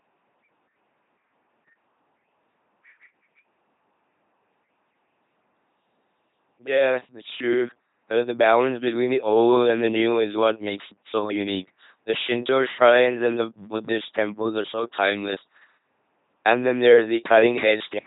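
From start to finish, the speech has passed through an LPC-10 vocoder at 2.4 kbit/s. Each moment becomes pure buzz or pure hiss, giving a robotic sound with nothing above 3.8 kHz.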